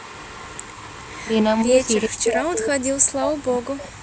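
Speech clip with two problems. From 0.0 to 2.06 s there's echo leak, a faint copy of the voice trailing about 0.41 s behind and roughly 20 dB down, likely from a far-end loudspeaker the echo canceller didn't fully clean up. Speech suppressed in double talk shows up as a brief dip of about 10 dB at 1.64 to 1.76 s, then a near-total dropout of around 40 dB from 2.07 to 4.02 s, likely the canceller muting the talker while the other side was also speaking.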